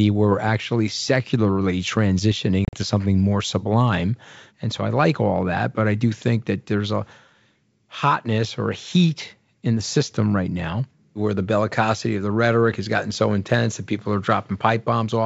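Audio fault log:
2.65–2.76 s packet loss on an ADPCM call: around seven lost packets leave hard-edged silent holes, the longest 40 ms. Unlike a clean dropout, the decoder's predictor falls out of step, so the speech returns briefly slightly distorted.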